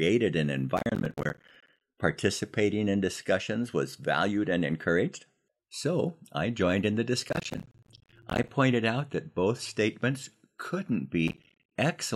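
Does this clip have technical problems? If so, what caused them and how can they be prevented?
Yes: processor overload crackle at 0.77–1.81 s, 7.29–8.50 s and 11.28–11.71 s, where missed deadlines on roughly 10 ms buffers left silent gaps. Reduce processing load or enlarge the buffer.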